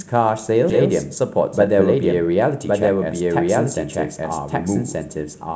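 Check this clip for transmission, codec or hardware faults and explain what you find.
Three faults affect this speech clip, carried over a G.722 call path whose band stops at 8 kHz.

A doubled audio track runs throughout. A second full-band copy of the speech sits at about the same level as the original, roughly one second behind it. This is likely because the sound was captured again through a slower route and mixed back in. You hear a dry, echo-free repeat with no room decay. On a spectrogram, each syllable pattern reappears about a second later at equal brightness, and the two layers overlap.

A skip ahead occurs between 0.70 and 0.72 s. Roughly a second of speech is dropped, as happens when a jitter buffer discards stale audio that later audio has already overtaken. Playback jumps forward with no silence or fill. The sound before and after is butted together, so speech lurches abruptly. 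In the waveform the envelope changes shape instantly at the join, with no gap. On a spectrogram, the formant tracks break and restart mid-pattern.

A jitter buffer speed-up runs from 1.30 to 3.21 s, at about 106 % of normal speed. The buffer held more than its target, so the receiver repeatedly cut out short pieces of a pitch period or a few, removing about a tenth of a second in total. Pitch stays the same but the delivery sounds slightly hurried. On a spectrogram, syllables and pauses appear compressed in time while harmonic spacing is unchanged. The waveform shows tiny splice points between periods.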